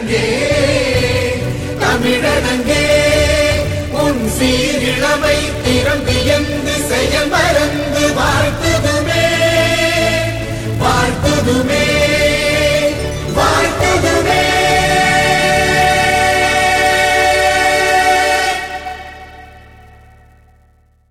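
From 0.97 s to the end, a filter restarted on every block resets to silence each block, so a small transient opens each one. The result is a 200 Hz buzz, suggesting 5 ms blocks. Unlike steady mains hum, it rises and falls with the sound's level.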